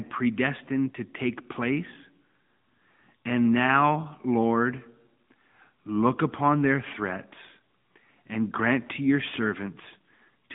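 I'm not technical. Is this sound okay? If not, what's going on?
No, not quite. The whole clip has been through the AMR narrowband mobile codec, the squeeze older 2G and 3G phone networks apply to voices. It keeps only a slim middle slice of the sound, roughly 150 Hz to 3.6 kHz, with nothing above about 3.7 kHz. The low warmth and the crisp top end are gone, so it sounds boxed-in and phone-like. The codec rebuilds the voice from a rough model, and the damage is plainly audible, giving a buzzy, synthetic edge from start to finish.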